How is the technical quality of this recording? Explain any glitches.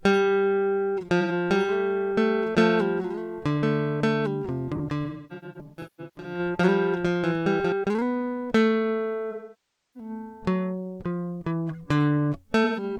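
The recording has two recurring problems: repeated dropouts in the music and a stretch where the music is heard twice.

AAC frame loss with concealment occurs from 1.20 to 1.32 s, 4.75 to 6.39 s, 9.31 to 10.10 s and 12.64 to 12.83 s. The short gaps sound like smeared, noisy patches. At 9.31 s the sound sinks toward silence and swells back. From 4.75 s the losses are scattered, the longest run roughly 300 ms. The decoder lost chunks of the stream and patched them from the last good spectrum, fading out as the gap lengthened.

A doubled audio track runs from 1.48 to 7.72 s. A dry copy trails about a second and a half behind, roughly 5 dB quieter, and starts and stops abruptly. The likely cause is the audio being picked up a second time through a slower path.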